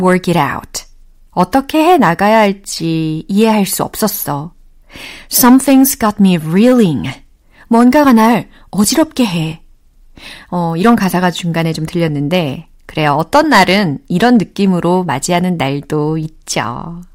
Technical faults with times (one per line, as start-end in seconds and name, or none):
0.00-17.14 hard clipping